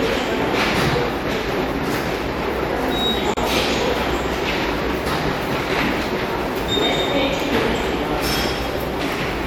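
At 3.34 s the sound drops out abruptly and stays silent for about 32 ms, until 3.37 s. The edges are hard but slightly softened, and the sound resumes exactly where it left off. This is a gap at a join of encoded pieces. The audio appears to have been encoded in separate chunks of about 6 s and spliced without trimming, so one run's padded last frame and the next run's start-up delay both remain as silence.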